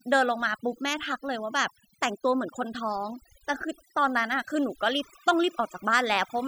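Overdone noise removal runs through the whole clip. A noise reducer set too aggressively has pulled individual frequency bands down whenever they sat near its noise estimate, taking low-level parts of the speech with them. The background drops and breaks up into twinkling specks.

From 4.81 s to the end at 6.47 s, timecode bleed appears. Linear timecode from an adjacent track or cable has leaked in as a square wave flipping between roughly 1 and 2 kHz, sitting roughly 25 dB under the speech. Its steady chirping warble fits 29.97 fps code.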